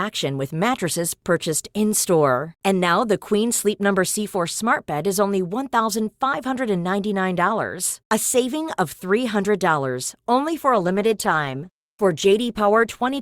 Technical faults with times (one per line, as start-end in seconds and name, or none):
10.70-13.22 adaptive stream at a lower bitrate